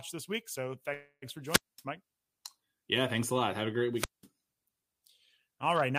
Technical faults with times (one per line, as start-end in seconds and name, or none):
0.93-1.24 call audio freeze
1.44-1.84 wireless microphone squelch dropout
3.94-4.27 wireless microphone squelch dropout